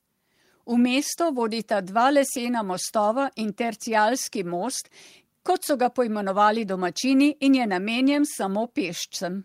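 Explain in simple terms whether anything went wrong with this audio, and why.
Nothing went wrong with this recording.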